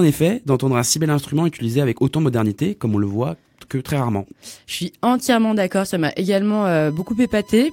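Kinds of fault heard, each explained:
USB whine: current drawn by the USB bus in 1 ms frames leaks into the audio, adding a steady 1 kHz tone about 30 dB below the speech near the end.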